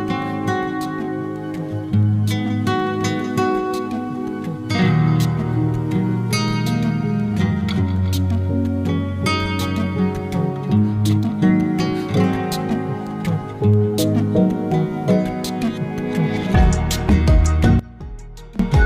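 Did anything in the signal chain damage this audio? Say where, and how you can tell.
Yes. One channel was likely inverted, most plausibly through a polarity-swapped lead in the analogue wiring. From 17.79 to 18.59 s the sound drops by about 20 dB, because the material common to both channels cancels when summed to mono, leaving only their difference.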